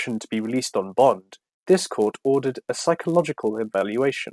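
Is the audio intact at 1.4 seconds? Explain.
No. Throughout the clip, including 1.4 s, the resampler restarted on every 10 ms block when converting 48 kHz to 24 kHz, leaving edge errors heard as a 100 Hz buzz under the speech.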